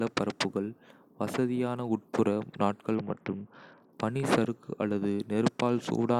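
Around 2.95 s the speech goes through a Bluetooth SBC bit pool drop that lasts until about 3.93 s. The link looks to have been squeezed, so the encoder cut its bit budget hard, which fits a fall from a bit pool near 31 to one around 7, roughly 61 kbps. The top sub-bands lose their bits, so the treble goes dull, and the remaining bands are quantised so coarsely that a gritty grain sits on the sound until the rate recovers.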